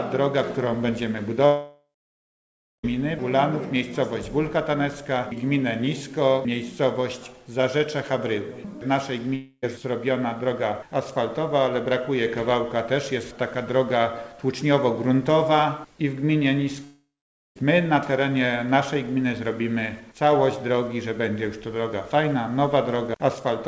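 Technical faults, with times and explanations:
1.46–2.85 s, 9.35–9.64 s and 16.84–17.57 s, long network dropout: the stream was likely cut off in transit, leaving gaps of about 1.4 s, 0.3 s and 0.7 s. Each time the receiver stretches the last sound into a fading buzz, then falls to silence, for about 1 s, 40 ms and 0.5 s respectively, before the sound resumes with that stretch simply gone. The G.722 call path, with nothing above 8 kHz, carries the concealment.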